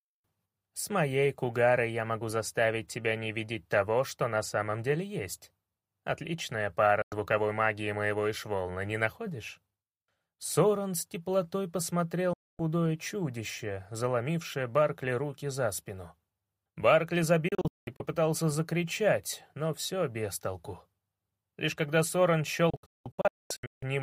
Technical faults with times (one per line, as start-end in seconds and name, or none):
7.02-7.12 digital broadcast dropout
12.33-12.59 digital broadcast dropout
17.48-18.00 digital broadcast dropout
22.70-23.83 digital broadcast dropout